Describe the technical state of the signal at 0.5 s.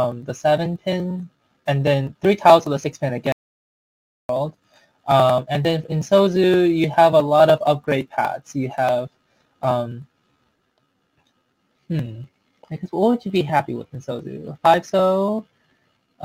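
At 0.5 s the signal is intact, with no audible fault at that moment.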